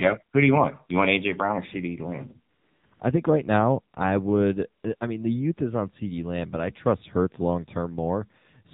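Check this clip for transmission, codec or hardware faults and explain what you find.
The clip shows two faults: AMR narrowband mobile codec coding throughout, and bursts of AMR comfort noise in two short stretches.

The AMR narrowband mobile codec affects the whole clip. The speech was squeezed through a mobile codec that samples at 8 kHz and rebuilds the vocal tract from a handful of pulses per frame, at a low rate that fits the 7.4 kbps mode. Nothing above 4 kHz survives, so the speech sounds muffled and telephone-like, with a plainly audible buzzy, synthetic edge from the sparse excitation.

AMR comfort noise appears at 2.54 to 2.84 s, 2.86 to 2.92 s, 2.94 to 3.00 s, 4.82 to 4.84 s and 4.96 to 5.00 s. Each time, the sending side judged the talker silent and stopped transmitting speech frames, for 300 ms at first and then between 20 and 60 ms. The receiver filled those gaps with generated noise shaped from a rough level and spectrum. 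The real background drops out and a smooth, steady hiss switches in and out.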